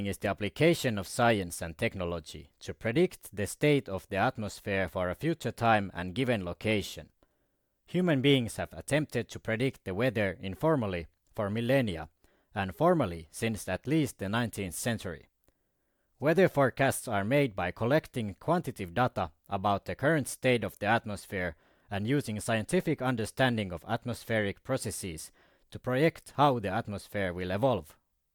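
No technical faults are audible.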